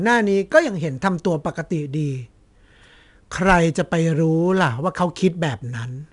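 4-bit ADPCM compression runs throughout: each sample is coded as a coarse step from a prediction, leaving gritty, level-tracking hiss on the speech and nothing above 10.6 kHz, which fits roughly a 22 kHz sample rate.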